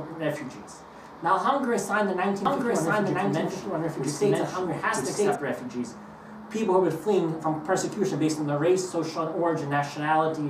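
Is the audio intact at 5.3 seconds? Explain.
No. A doubled audio track runs from 2.45 to 5.35 s, likely from a second capture path or an edit holding two copies out of step. A full-band copy trails about one second behind at roughly equal level, dry, ending abruptly.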